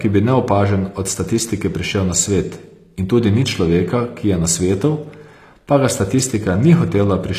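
From start to finish the speech carries sample clock jitter. The converter's timing wanders by roughly 1.5 microseconds, so steep parts of the waveform land at slightly wrong values. This adds a rough hiss, around 35 dB below the signal, that swells on loud, bright syllables and disappears in pauses. A spectrogram shows a faint broadband haze tracking the speech energy.

Also throughout, the treble sounds gritty and metallic, with s sounds smeared and lispy. Nothing reaches above 14.9 kHz. This is likely HE-AAC compression at a low bitrate, consistent with about 24 kbps, where upper bands are rebuilt from copies of lower ones. On a spectrogram the top shows a hard ceiling and blocky, repeated-looking texture above the crossover.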